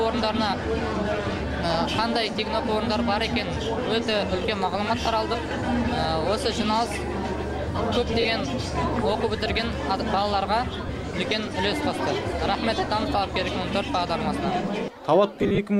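Around 5.49 to 5.51 s the sound briefly turns into a noisy smear. That's lost LE Audio frames: about 20 ms went missing, which fits two 10 ms frames, and the LC3 decoder filled the gap by replaying the last spectrum with scrambled signs. The same thing happens at 8.21 to 8.25 s (40 ms), 10.87 to 10.89 s, and in a scattered burst from 15.35 to 15.58 s with runs of up to roughly 40 ms, all under light codec softening.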